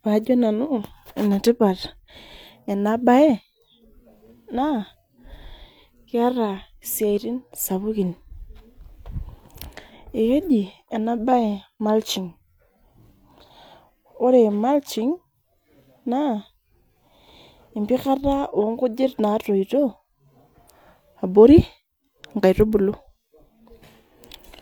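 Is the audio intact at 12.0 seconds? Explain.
Yes, the audio at 12.0 seconds is intact, with no dropout, distortion or other fault audible at that point.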